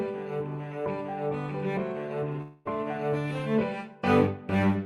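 At 2.41 s the audio stops arriving and the last sound is drawn out as a smeared, decaying buzz for roughly a quarter of a second, with no drop to silence. At 2.68 s the signal resumes with about 240 ms of the original missing, so the material jumps forward. This is a long network dropout: the pattern is likely a burst of lost packets, with the receiver's concealment stretching the final sound to cover the hole.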